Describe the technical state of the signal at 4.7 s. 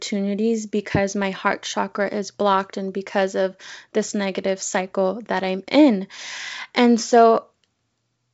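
At 4.7 s the speech is intact, carried cleanly over a G.722 wideband telephone path at 64 kbit/s, with nothing audible above about 7.7 kHz.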